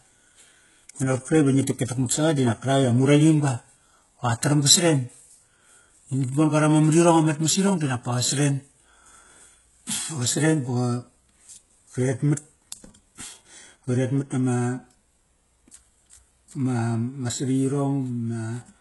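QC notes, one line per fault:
Throughout: HE-AAC compression. The speech has gritty, metallic treble with lispy s sounds and nothing above 11.5 kHz. This is likely heavy HE-AAC coding at a very low bitrate, around 12 kbps, with the upper band rebuilt by spectral band replication from copied lower harmonics that no longer line up.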